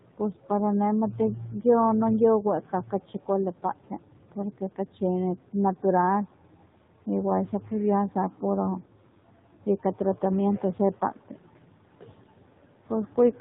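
Across the whole clip the speech carries the sound of the AMR narrowband mobile codec. The band stops at 4 kHz, and the voice has the buzzy, synthetic edge of a pulse-excited vocal-tract model given very few bits per 20 ms frame. That coarseness fits a low mode of around 7.4 kbps. The damage is plainly audible, with dull sibilants and a reedy, processed texture to every syllable.

Speech cut by the noise suppressor appears five times, where the suppressor mistook parts of the speech for background and pulled them down with it. The first is from 0.01 to 0.5 s, the second from 2.43 to 5.02 s, and the third from 7.48 to 7.71 s. The fourth runs from 8.82 to 10.22 s, and the last from 10.6 s to the end of the clip. The deepest drops reach about 13 dB, except at 7.48 s, where the drop is about 7 dB. Only scattered fragments within each span are affected: roughly a second in total in the longest stretches, and a fraction of a second in the shorter ones. 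Consonants and word tails there sound swallowed or faint. The room noise sits about 30 dB below the speech.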